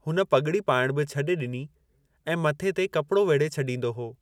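No faults turn up anywhere in the recording; the signal holds steady throughout with nothing to flag.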